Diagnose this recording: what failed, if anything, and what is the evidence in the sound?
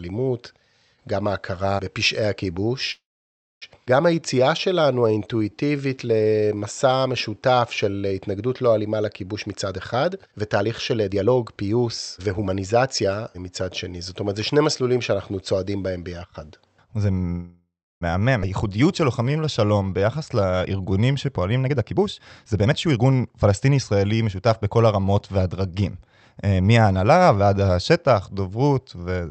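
Call audio freeze, network stage. At 2.91 to 3.64 s and 17.31 to 18.03 s, the sound stalls for 0.7 s. The last sound is stretched into a fading buzz, then silence of 0.61 s and 0.34 s. The speech resumes where it stopped. Packets were likely delayed until the jitter buffer ran dry.

Skip ahead, network or jitter buffer stage. At 3.86 to 3.88 s, roughly half a second of speech vanishes. At 18.41 to 18.44 s, roughly 0.3 s vanishes. Each jump is almost seamless. The receiver discarded a stretch while later audio was already queued, cutting the built-up delay.

Jitter buffer slow-down, call processing stage. From 4.15 to 8.14 s, speech plays at 88% speed and gains 468 ms. From 18.67 to 21.42 s, it plays at 89% speed and gains 317 ms. Pitch stays put while sounds drag. Single pitch periods were repeated to rebuild a low buffer.

Jitter buffer speed-up, call processing stage. From 9.33 to 13.05 s, speech runs at 119% speed. 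From 21.66 to 24.71 s, it runs at 123% speed. Each stretch loses roughly 0.7 s and sounds hurried at unchanged pitch. Short pitch-period slices were removed to drain an overfull buffer.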